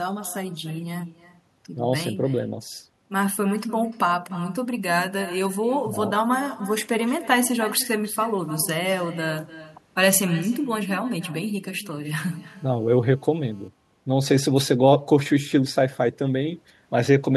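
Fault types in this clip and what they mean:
Echo with no canceller: the far end's loudspeaker feeds its microphone and nothing strips that out, so every phrase returns roughly a third of a second later as a thinner copy about 16 dB down, running throughout. Unlike reverberation, it is a distinct delayed repeat, not a smooth tail.
GSM phone buzz: a nearby 2G handset on a call sends radio bursts about 217 times a second, which the audio circuit rectifies into a hard, raspy 217 Hz buzz rich in harmonics, about 31 dB below the signal, from 12.26 to 13.68 s. Unlike mains hum, it is harsher and sits off the 50/60 Hz series.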